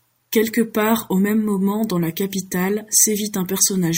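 Near the end of this speech clip, from 2.95 to 3.05 s, the sound turns briefly harsh and crackly, a short burst of grit on the loudest part of that moment rather than a steady fuzz. This is hard clipping: the signal there is driven roughly 4 dB past what the stage can pass, so the peaks are sheared off flat, and those squared-off tops generate high harmonics that the ear hears as crackle.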